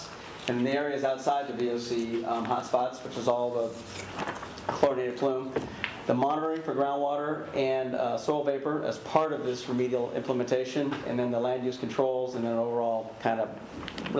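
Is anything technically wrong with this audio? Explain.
No, nothing technically wrong can be heard here.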